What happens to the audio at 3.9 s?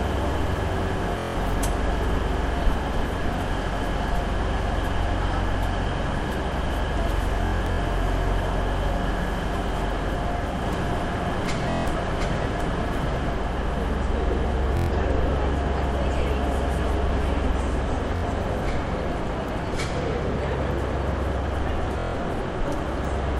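Nothing goes wrong at 3.9 s; the sound plays through that moment intact, with no dropout, click, glitch or other fault to be heard.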